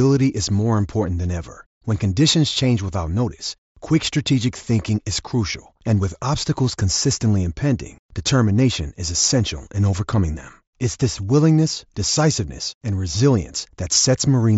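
No faults can be heard.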